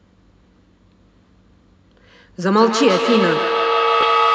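From 2.57 s to the end, a feedback echo between two devices sets in: each syllable returns roughly every 150 ms, thinner and ringing, reaching about 1 dB below the direct speech. A second device is replaying this audio into the microphone, and echo cancellation cannot remove sound it did not play itself.

At 4.01 to 4.04 s there is a Bluetooth stutter: a brief repeated slice as about 14 ms of audio arrives late or is lost and the receiver replays its last buffer. This fits a single lost frame, heard as a short glitch before playback resumes.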